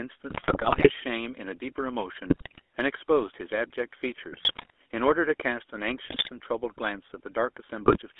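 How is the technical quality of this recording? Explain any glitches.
The quality is poor. This is speech over a GSM phone link, and it has two problems: coarse codec coloration throughout and bursts of corrupted frames.

The GSM full-rate codec runs the whole way through. Its damage is plainly audible. The codec rebuilds the voice from a vocal-tract model driven by sparse, regularly spaced pulses. The sound fits a 13 kbps full-rate stream. The band runs only from 300 Hz to 3.5 kHz. The result is thin, buzzy and gravelly speech.

GSM bit errors strike five times: 0.3 to 0.91 s, 2.27 to 2.61 s, 4.32 to 4.7 s, 6.06 to 6.29 s, and 7.86 to 7.98 s. On a weak radio link, flipped bits reach the decoder. Corrupted filter, pitch and gain values warp the spectrum and jolt the level frame by frame. The damage points to a few percent of bits in error. Each burst sounds like squawks, pops and gargling.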